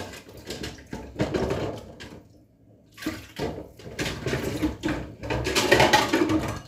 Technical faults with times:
4.22-6.68 sudden gain jump

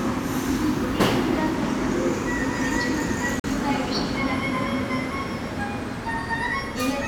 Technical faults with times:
3.40-3.44 Bluetooth dropout

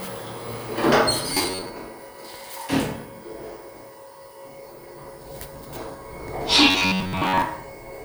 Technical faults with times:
1.34-1.75 robotic sound from repeated short buffers
6.70-7.42 robotic sound from repeated short buffers

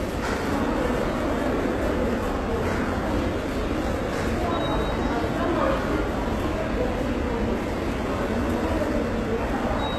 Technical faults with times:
0.00-9.98 HE-AAC compression

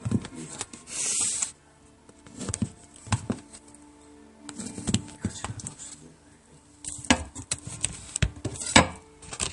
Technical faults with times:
0.00-9.52 MP3 compression

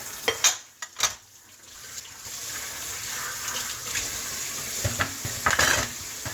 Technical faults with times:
1.75-2.25 chunks out of order
5.00-5.50 chunks out of order

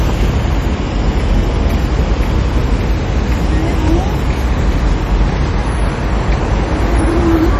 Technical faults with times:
0.00-7.59 MP3 compression

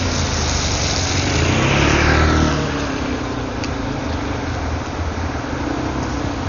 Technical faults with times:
0.00-6.49 Dolby Digital compression

